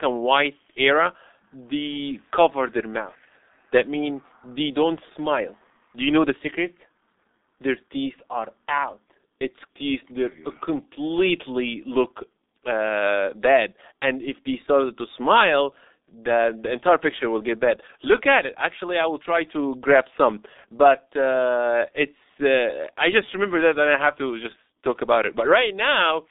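From start to finish the speech passes through a G.723.1 codec, heavily damaged, with nothing above 3.8 kHz and a band of roughly 250 Hz to 3.7 kHz. Unlike plain telephone filtering, the slowly updated voice model adds hoarseness and smeared consonants, which fits a bitrate near 6 kbit/s.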